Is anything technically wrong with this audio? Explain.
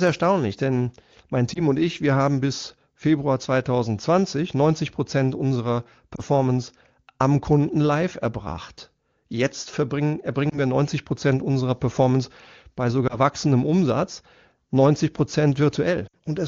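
Yes, there are brief dropouts from lost AMR speech frames, at 1.53–1.61 s, 6.15–6.20 s, 10.50–10.58 s, 13.08–13.18 s and 16.07–16.15 s. The wideband AMR coding itself sounds clean. The decoder papers over each gap by repeating the last good pitch and spectral shape at falling gain. The first four are single-frame glitches, heard as a quick dip or warble. The last one is longer, which fits about three frames or 60 ms, and it drops to near silence within two frames before the sound recovers a bit rough.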